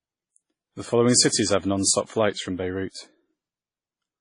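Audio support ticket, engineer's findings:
Speech band dull throughout, nothing above 10.1 kHz. Artefacts of two codecs heard together; two distinct artefact textures layered. Probable component: encoding chain. Likely transcoding between lossy codecs. Character fits a low-rate WMA pass, around 24 kbit/s, re-encoded to MP3 near 40 kbit/s. Second encoder spends bits on first codec's artefacts, adds its own; lowest cut-off survives.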